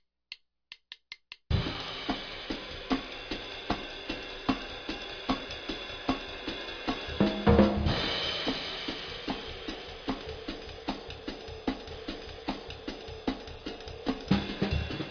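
Nothing stood out as a technical fault on listening to this clip.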